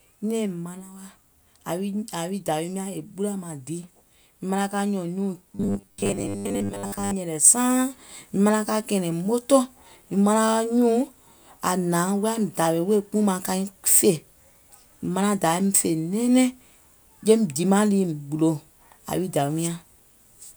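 From 5.55 to 7.14 s the speech turns into robotic sound from repeated short buffers: a rigid, metallic 100 Hz buzz that loosely tracks the syllables, likely from about 10 ms chunks looping for most of that stretch. Unlike a plain pitch shift, the buzz pitch never moves.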